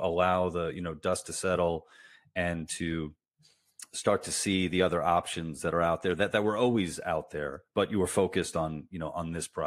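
No technical faults are audible.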